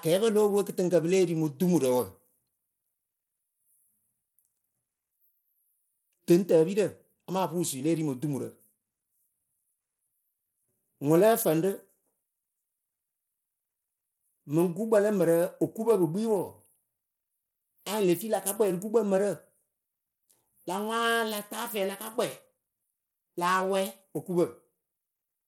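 Bluetooth SBC compression runs through the whole speech clip. The treble is thin and flickering, with a gritty, grainy noise and aliasing clinging to the sound, a pattern that points to this codec, likely running at a low setting near 96 kbps. SBC divides the signal into a handful of wide sub-bands and hands out bits with no model of hearing, so at a small bit pool the upper bands get starved while the rest are coarsely quantised.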